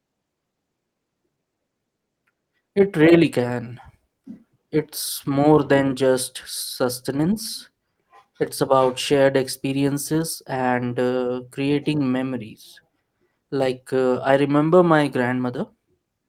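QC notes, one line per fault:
throughout, clock drift between sender and receiver: the sender's clock runs roughly 5% fast, so the receiver's buffer keeps overfilling and the speech carries small, irregular timing hiccups.
0.09–16.06 s, repeated timing corrections: the receiver keeps cutting short pieces out at uneven spacing to match the 105% sender rate, heard as slight skips and unsteady tempo.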